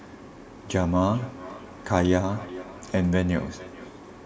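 From 1.09 s to 4.01 s the speech carries a feedback echo between two devices. A second device in the room replays the call and this microphone picks it up again. Each syllable returns roughly every 0.4 s, thinner and ringier, peaking about 17 dB below the speech.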